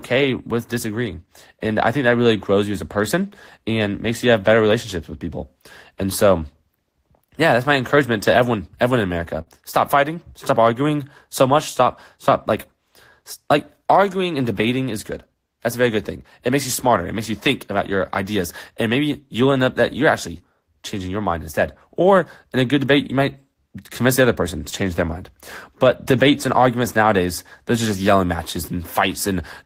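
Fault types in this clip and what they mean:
Burst of packet loss: several consecutive packets arrived too late or not at all, so the receiver extended the last sound and faded it. After "to everyone everyone in", near 9.41 to 9.61 s, a held smear stands in briefly before the audio jumps ahead with material missing.
Short concealed packet loss: about 20 ms of audio never reached the decoder, so the receiver synthesised a continuation and crossfaded back. It shows as a brief smear after "up that you're actually" at 20.38 s and before "change their mind" at 24.70 s.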